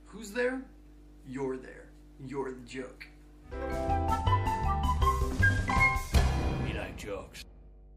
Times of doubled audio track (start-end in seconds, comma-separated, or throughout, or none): none